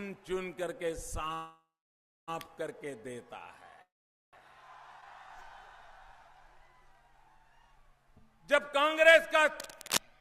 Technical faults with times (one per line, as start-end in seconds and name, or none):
1.28-1.32 short stall from a late packet
1.34-2.30 call audio freeze
3.82-4.35 call audio freeze
9.60-10.00 cable scratch noise